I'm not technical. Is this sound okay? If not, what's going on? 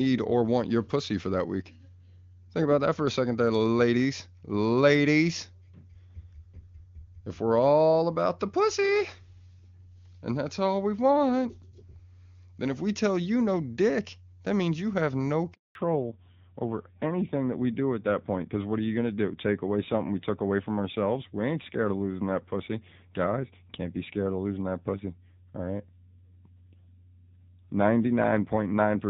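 No. At 15.53 s, right after "means you have no", a handover gap occurs: the phone switched networks and nothing came through for about 0.22 s, so the voice cuts to silence. From 15.75 s to the end, a fallback to narrowband follows: the call dropped from HD Voice, which sounds clear before the switch, to an older codec, so everything above 4 kHz disappears and the voice turns duller and muffled.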